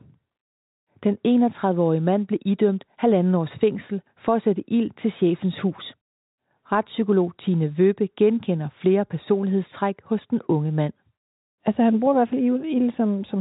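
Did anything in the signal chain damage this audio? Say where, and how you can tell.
No, the speech shows the narrow band of a G.711 telephone path, with nothing above about 3.8 kHz, which fits 64 kbps mu-law coding, and the chain shows no damage beyond what that format itself imposes.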